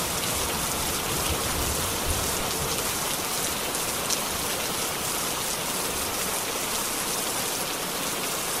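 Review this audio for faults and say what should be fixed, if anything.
A phantom power thump sits at 2.40 to 2.47 s: a deep low-frequency thud, peaking at about -27 dBFS and dying away within roughly 15 ms, caused by a supply voltage step passing through the input's coupling capacitors. Unlike a handling bump or plosive, it is a single clean pulse with no rumble or breath. Switch phantom power only while the channel is muted or the fader is down.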